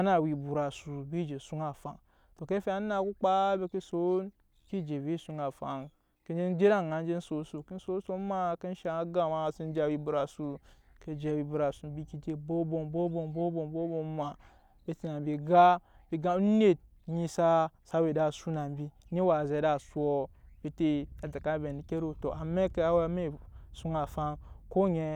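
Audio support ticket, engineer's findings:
Speech signal checked across the whole recording with no technical faults found, so no component or mechanism is implicated.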